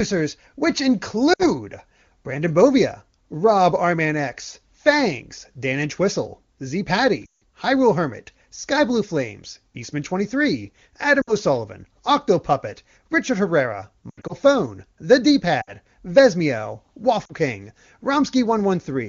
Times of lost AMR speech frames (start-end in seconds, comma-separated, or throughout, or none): 1.33-1.45, 7.26-7.41, 11.21-11.34, 14.10-14.33, 15.61-15.73, 17.26-17.33